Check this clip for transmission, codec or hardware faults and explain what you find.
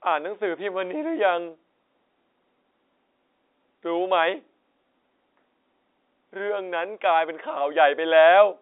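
No transmission, codec or hardware faults are audible: the speech comes through as ordinary G.711 telephone coding, with the sound confined to a narrow line band of roughly 300 Hz to 3.7 kHz, consistent with a standard 64 kbps mu-law channel, and any quantisation noise stays faint beneath the signal.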